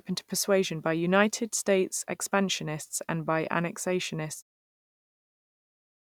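No technical faults detected.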